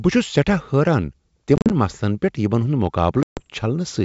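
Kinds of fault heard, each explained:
Packet loss on an ADPCM call: chunks of the wideband G.722 stream go missing and are filled with silence, leaving hard-edged holes. The decoder's predictor and step size then drift from the sender's, so the sound comes back slightly distorted for a few tens of milliseconds. Around 1.6 s, just before "مسلن پیٹھ یمن ہُند", about 90 ms drops out in gaps scattered over 140 ms. Later, right after "مسلن پیٹھ یمن ہُند", 140 ms vanishes.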